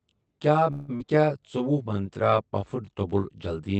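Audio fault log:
throughout: channel delay (comb filtering). One channel trails the other by around 20 ms, and the mono sum cancels their shared content at evenly spaced frequencies starting near 30 Hz. The delay is long enough that the sound turns rough and slightly doubled rather than simply dull. That separates it from the band-limited coding of the call codec, which removes only the top end. The notches stay at fixed frequencies instead of sweeping the way a flanger's do.
0.71 to 0.90 s: call audio freeze. For about 169 ms the last sound is carried on as a buzzy tail and never drops into true silence. Packets were likely held up until the jitter buffer ran dry, so the receiver filled the wait. When audio resumes it picks up exactly where it stopped, with nothing lost. The extra time is inserted, not taken away, which is what separates it from a skip.
0.96 to 1.02 s: skip ahead. Playback jumps forward after only a brief fill of about 34 ms. 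Roughly 150 ms of sound is gone, and the two sides are joined almost directly. Later audio was already queued, and dropping a stretch let it catch up. Here material is missing and there is no audible pause, the reverse of the freeze just before it.
1.18 to 3.10 s: jitter buffer slow-down. This stretch runs at about 94% speed, with roughly 123 ms added by repeating single pitch periods and pieces of pauses many times in a row. Sounds are drawn out, but the pitch stays where it was. A slowed tape or a sample-rate mismatch would drop the pitch along with the tempo.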